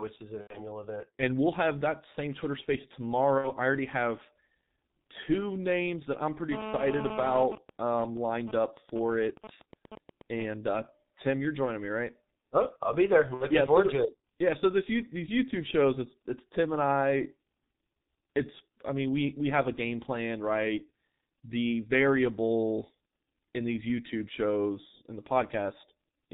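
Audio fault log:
throughout G.723.1 codec: heavy 6.3 kbit/s coding leaves the speech muffled, hoarse and consonant-blurred; the spectrogram is empty above 4 kHz, with smeared, blocky formants.
0.41–0.60, 3.38–3.51, 13.34–13.46 VoIP packet loss concealed by the speech codec: gaps of 90 ms after "is an", then 60 ms before "I already have" and at 13.34, are filled with fading extrapolated sound. They show as repeated, decaying stripes.
6.52–7.43 GSM phone buzz: a nearby phone in a call is rectified into a hard 217 Hz rasp about 7 dB below the speech, after "names that I'm pretty", drawn as evenly spaced harmonic lines.
7.45–10.46 GSM signalling bursts: a nearby phone, its user silent, gives even ticks with a longer 217 Hz buzz twice a second roughly 15 dB down, seen as intermittent vertical clusters in the waveform.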